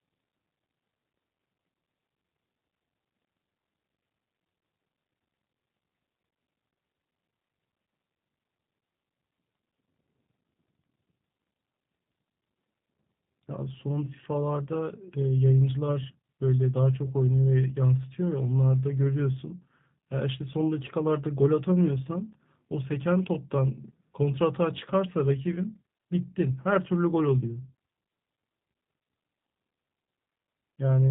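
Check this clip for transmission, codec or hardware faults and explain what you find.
G.729 codec damage runs throughout the speech, plainly audible from start to end. At about 8 kbit/s, each 10 ms frame is rebuilt from a vocal tract filter, a pitch predictor and a few pulses, so nothing above 4 kHz survives and voices sound muffled, slightly rough and synthetic.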